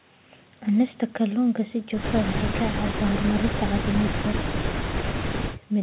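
Nothing in this speech stands out as a fault; it just has the narrow, phone-line sound you'd expect from a call carried over what sounds like G.711 mu-law at 64 kbps, with nothing above 4 kHz.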